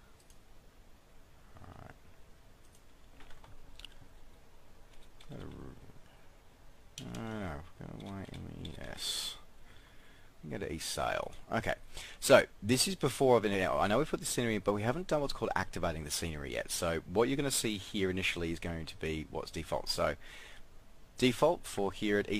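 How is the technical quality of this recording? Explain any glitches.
No glitches can be heard in this recording. There is nothing in the audio that calls for an explanation.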